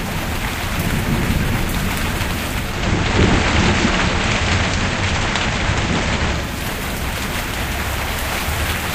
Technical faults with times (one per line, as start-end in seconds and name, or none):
2.58-6.61 digital radio blending to analogue